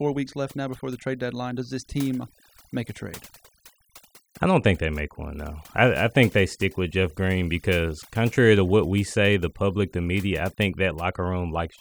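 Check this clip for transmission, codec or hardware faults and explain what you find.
Throughout the speech, the background drops and breaks up into twinkling specks. This is overdone noise removal: a noise reducer set far too strong cuts individual frequency bands whenever they sit near its noise estimate, taking quiet voice detail away with the noise.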